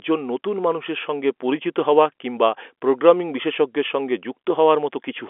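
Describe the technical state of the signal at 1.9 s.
At 1.9 s the audio is intact, with the speech carried cleanly through G.711 telephone coding and holding to the usual narrow telephone band, nothing above about 3.7 kHz.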